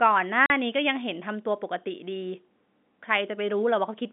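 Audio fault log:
0.46–0.50 s, packet loss filled with silence: the speech drops into a 40 ms hard-edged hole, which fits two lost 20 ms packets played as silence.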